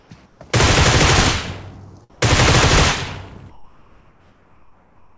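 Comfort noise in place of the background appears from 0.0 to 0.1 s, 0.26 to 0.4 s, 2.1 to 2.22 s, and 3.5 to 5.16 s. In each pause, the real background, about 33 to 37 dB below the loud parts, gives way to a steady, featureless hiss about 4 to 6 dB quieter. The longest stretch lasts 1.66 s. The likely cause is discontinuous transmission: the sender stops sending in pauses and the receiver synthesises matching noise. Throughout, nothing sounds above 8 kHz, which fits a wideband call codec.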